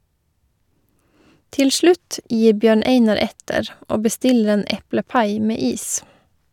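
No technical faults are audible.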